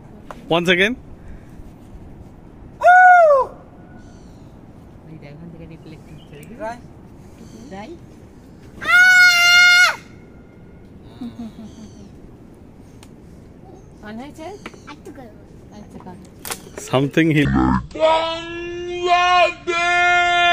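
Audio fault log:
17.45–20.52 s, section at the wrong speed: the closing stretch was likely played out against the wrong clock and runs at 0.522 times its recorded speed, so the sound drags to about half pace and drops roughly ten semitones, turning deep and slow.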